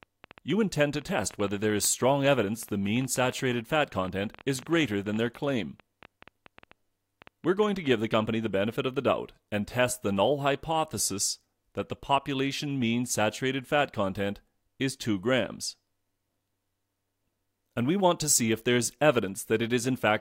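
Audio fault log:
0.03 to 7.91 s: train of clicks. A run of short, similar pulses ticks over the sound at about 9 per second, around seventy in all, with uneven spacing. The clicks stand roughly level with the programme, so they pop through clearly, in quiet gaps as well. The pattern likely comes from interference from nearby equipment or a faulty connection or power supply injecting repeated pulses.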